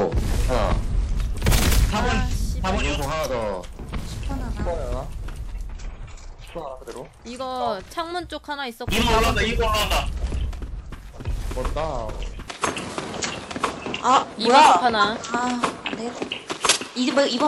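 Input switched to a poorer device, from 12.48 s to the end: at that moment the sound abruptly loses its top end, with nothing above about 11.4 kHz, and the level shifts by a few decibels. A new, faint background noise appears, well below the signal. There is no gap at the change. The most likely cause is the system moving its input to a different, narrower-band microphone partway through, with that device's own tone, gain and noise floor.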